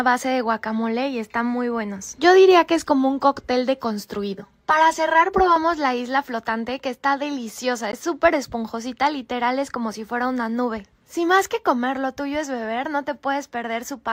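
From 4.35 to 5.56 s the sound turns hollow and phasey, as if heard through a tube, with a fixed set of frequencies hollowed out rather than a level drop. This is channel delay (comb filtering): one channel lags the other by around 5 ms, and when the two are summed to mono the shared content cancels at evenly spaced frequencies, the first notch falling near 100 Hz and the rest repeating up the spectrum.

At 7.92 s there is a brief hole in the audio, about 13.3 ms of silence, after which the sound resumes further along, as though it had kept playing through the gap. The likely cause is a Bluetooth dropout: audio data failed to reach the headphones in time and was discarded, and the short length of the gap fits a single lost packet.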